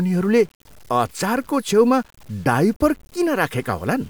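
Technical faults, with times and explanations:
Throughout: low bit depth without dither. The signal was likely cut down to about 8 bits and truncated rather than rounded, with no dither added, so each sample drops to the step below it. The resulting error tracks the speech itself, sitting only around 35 dB under it, so quiet passages and decaying syllable ends turn gritty and grainy, and the softest moments sputter between adjacent levels or fall straight to silence.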